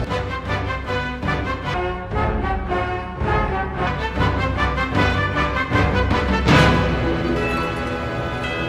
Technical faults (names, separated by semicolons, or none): section at the wrong speed